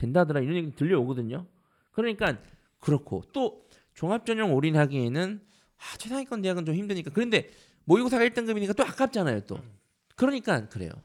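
Channel delay causing comb filtering affects the speech from 0.00 to 2.27 s. One channel arrives a handful of samples late, a fraction of a millisecond, and when the two are folded to mono the shared content cancels at evenly spaced frequencies. With so short an offset the first notch falls high, around 7 kHz, so the opening of the recording sounds dulled and slightly phasey at the top, losing sibilance and air until the channels realign.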